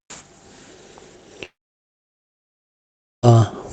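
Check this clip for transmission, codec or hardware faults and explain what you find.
One fault stands out. It sits on a call path whose top end stops near 8 kHz, which fits Opus wideband coding.

From 1.45 to 3.25 s there is a long network dropout. Audio likely stopped arriving, so the receiver stretched the last sound into a brief fading buzz, then near silence. Speech resumes with about 1.8 s lost.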